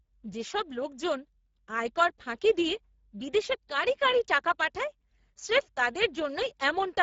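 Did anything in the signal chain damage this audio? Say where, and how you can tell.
Yes. The damage happens at the codec stage and runs through the whole speech clip. It is the Speex codec, a CELP speech coder. The voice sounds hoarse and noisy, and nothing is left above 7.7 kHz. The coder's excitation gets very few bits, which fits a rate of about 10 kbps, so the high band is only a shaped, noise-like fill. Plain low-pass filtering or resampling would lose the top cleanly without adding this roughness.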